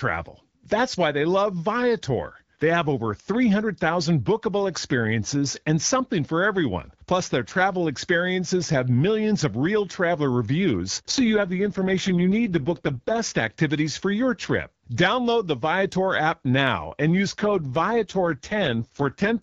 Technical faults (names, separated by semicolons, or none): AMR rate drop